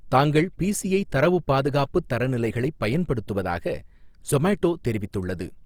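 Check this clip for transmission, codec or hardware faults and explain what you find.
There's one fault, running through the whole recording: audible Opus compression. The speech has a grainy, rough edge, and fine detail turns noisy rather than clean. That's likely the encoder working in its music-style CELT mode at a low bitrate, something around 24 kbps. It keeps each band's energy but fills bands it can't afford to code properly with folded or noise-like content. Bandwidth stays full, reaching up to about 20.4 kHz.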